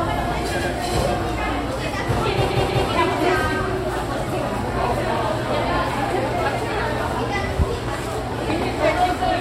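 At 0.58 s the sound stutters. Repeated frames cause this: a 92.9 ms block, which fits a pair of compressed frames, plays once more, adding 92.9 ms. At 2.49 s a 185.8 ms block plays twice more, running to 2.86 s and adding 371.5 ms.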